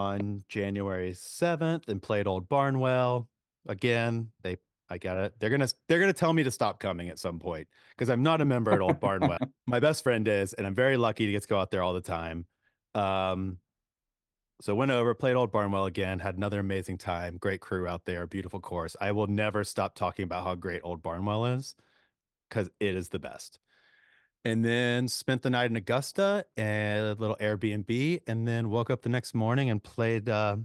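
At 9.37 s the speech skips ahead. Roughly 0.7 s of audio never plays, and the two sides of the jump are butted together with no silence or concealment filling the hole. That distinguishes it from a dropout or a concealed packet loss, where you would hear a gap, a fade or a smeared repeat. Here the talk simply lurches forward mid-flow, most likely because a late burst overfilled the receiver's jitter buffer and the oldest audio was thrown away.

From 9.49 s to 11.28 s, just before "to get to go", a jitter buffer speed-up follows. The receiver is still holding more delay than it wants, so it trims tiny slices of one or a few pitch periods over and over, about a fifth of a second in total. The speech runs at roughly 110% speed and sounds rushed, yet the pitch stays where it was. That unchanged pitch is what separates it from a resampling or clock-rate error, which would raise the voice along with the tempo.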